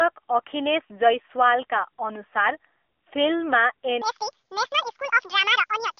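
From the start, the speech carries an AMR narrowband mobile codec sound: nothing passes above 3.5 kHz or below about 300 Hz, and the buzzy, synthetic texture points to a low bitrate near 7.4 kbps, unlike plain band-limiting, which stays clean. From 4.02 s to the end, a section plays at the wrong speed, 1.8 times too fast, likely from a wrong playback clock. Pitch rises roughly ten semitones together with the hurried tempo, which rules out a pitch shift alone.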